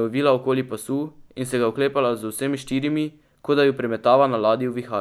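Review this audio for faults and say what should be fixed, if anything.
Nothing stood out on listening, so there is nothing here that needs fixing.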